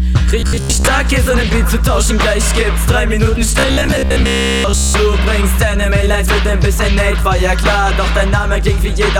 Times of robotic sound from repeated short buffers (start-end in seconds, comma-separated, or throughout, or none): 0.40-0.87, 3.59-4.96